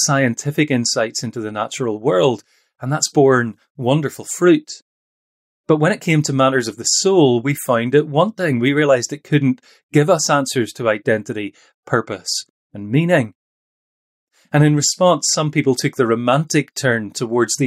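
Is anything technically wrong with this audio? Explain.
No, nothing technically wrong can be heard in this speech recording. There is no fault to point to at any moment in it.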